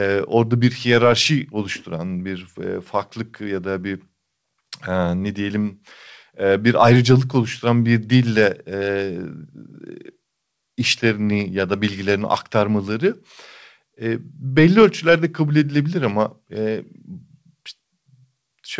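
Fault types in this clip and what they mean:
There are no fault types in this clip.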